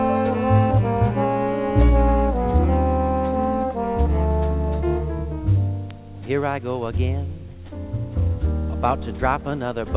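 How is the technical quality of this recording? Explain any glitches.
No glitches or dropouts can be heard in this recording.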